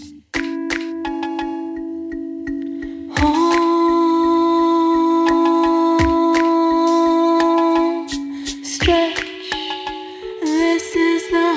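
No technical faults can be heard here; the audio comes through a call connection, so nothing is present above 8 kHz.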